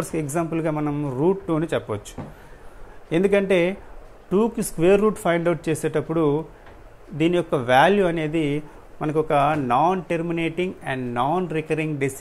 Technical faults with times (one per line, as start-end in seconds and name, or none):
none